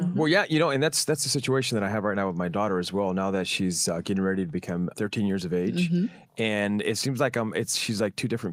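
Nothing in the speech stood out as a technical fault on listening.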